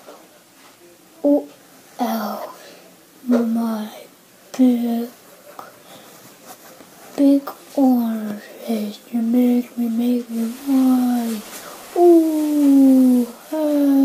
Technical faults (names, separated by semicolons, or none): digital radio blending to analogue